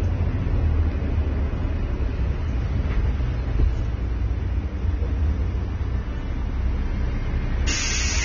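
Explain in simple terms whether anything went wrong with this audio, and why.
Heavy squeezing of the file, most likely by AAC compression at a low setting, throws away detail to save space. Throughout the recording nothing is left above about 6.9 kHz, so the sound comes across dull and muffled, with a smeared, fizzy or warbling edge.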